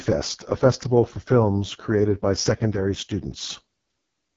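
Throughout, the speech passes through the AMR wideband (HD Voice) codec at what sounds like its lowest mode, which fits 6.6 kbit/s. With so few bits, the vocal tract model breaks down, leaving the voice rough and raspy, with nothing above 7.3 kHz.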